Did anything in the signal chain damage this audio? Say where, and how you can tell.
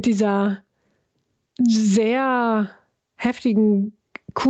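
Yes. Gain pumping runs throughout the speech, with the level swinging by something like 15 dB, so loud and quiet passages sit unnaturally close together and the sound feels squashed. The likely cause is input gain set far too high at the microphone stage, forcing a fast limiter or compressor to clamp down on every peak and release in the gaps. The missing content above 8 kHz comes from the call path, not this fault.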